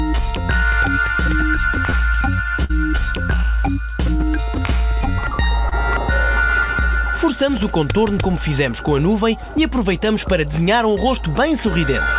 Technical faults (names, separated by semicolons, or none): short concealed packet loss; burst of packet loss